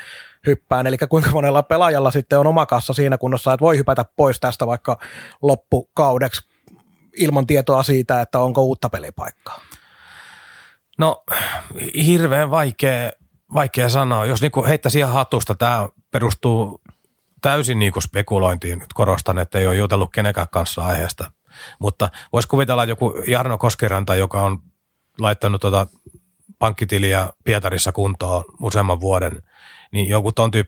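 No technical faults can be heard anywhere in the recording, and the speech signal stays continuous and intact throughout.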